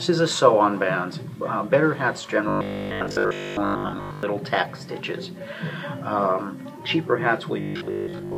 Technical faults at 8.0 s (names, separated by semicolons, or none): robotic sound from repeated short buffers